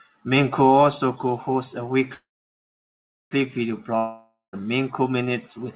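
A speech clip carried over a narrowband call path, with nothing above 4 kHz, which fits G.711 A-law coding. From 2.14 to 3.33 s there is a call audio freeze, likely from packets stalled in transit draining the jitter buffer: the last sound is stretched into a short fading buzz, then about 1.07 s of silence, and the speech resumes where it stopped, 1.17 s late but with nothing lost. From 3.97 to 4.55 s a long network dropout, likely from packets that never arrived, is heard as a fading tail, about 0.14 s of silence, and speech returning with roughly 0.56 s cut out.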